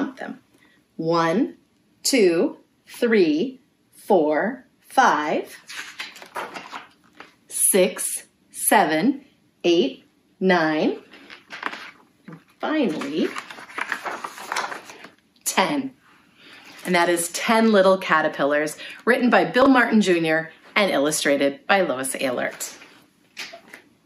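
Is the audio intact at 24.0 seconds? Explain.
Yes, the audio is intact at 24.0 seconds, with nothing audibly wrong at that moment.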